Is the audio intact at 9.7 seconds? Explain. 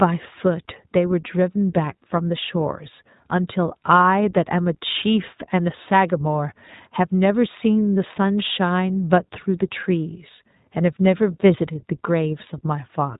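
No. At 9.7 seconds the speech carries the iLBC codec coloration that runs through the entire clip. Each short block of speech is rebuilt independently from a compact model of its excitation, with a rhythm that fits 20 ms frames at a bitrate around 15 kbps. The result is plainly audible: a rough, slightly synthetic texture, and a narrowband, telephone-like sound because nothing above 3.8 kHz survives.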